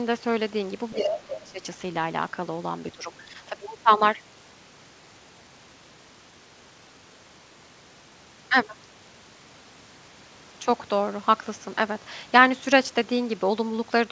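From 0.95 to 1.62 s the speech dips by roughly 20 dB, likely speech suppressed in double talk, with the echo canceller turning everything down while both sides spoke. The waveform shows a hollowed envelope, and the spectrogram shows nothing above the 8 kHz ceiling typical of G.722.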